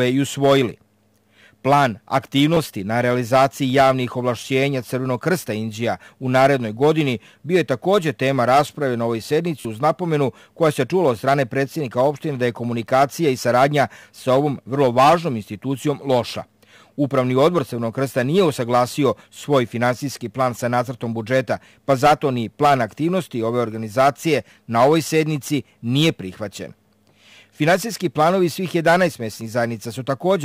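Repeated buffer at 2.54–2.57 s and 9.60–9.65 s: an 11.6 ms chunk, fitting a 512-sample buffer, replays two then four extra times, buzzing briefly. The waveform shows identical tiles with hard joins.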